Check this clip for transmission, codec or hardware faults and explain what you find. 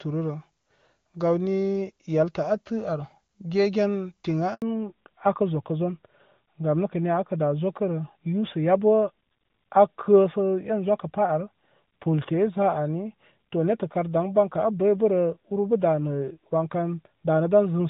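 Two faults, both tied to one network switch during the speech.

At 4.54 to 4.62 s, right after "ar gegen tiŋ a", a handover gap cuts the sound for 80 ms. No frames arrive while the call changes networks, so the waveform shows a flat, empty stretch.

From 4.62 s to the end, the call falls back to narrowband. The change from AMR wideband, which before the switch sounds clean and fits 23.85 kbit/s, to a narrowband codec, which fits AMR-NB at 12.2 kbit/s, removes everything above 4 kHz. The spectrogram shows a hard ceiling there, and the speech turns duller and rougher.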